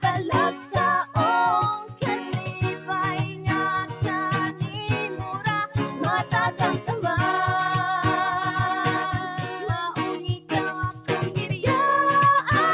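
From start to finish a noise suppressor built for speech is working on sound it was never meant for. It treats sustained material and decaying tails as noise, so the level keeps dipping and recovering by roughly 5 dB while onsets pass through intact. The result is a pumping, thinning texture. Unlike a compressor, the swings follow how steady the sound is, not how loud. The narrow band, with nothing above 4 kHz, fits the G.711 call path and is separate from this.

On top of that, there are moments where the suppressor cuts a sound harder than everything around it: 0.52–0.75 s (about 7 dB), 1.8–2.02 s (about 10 dB), 4.52–4.68 s (about 7 dB), 5.67–6.0 s (about 7 dB), 9.23–9.67 s (about 6 dB), 9.98–10.52 s (about 10 dB) and 10.72–11.09 s (about 10 dB). Each lasts a fraction of a second. A held or fading sound sinks or has its decay clipped short, but it never drops to silence, which is what separates these from dropouts.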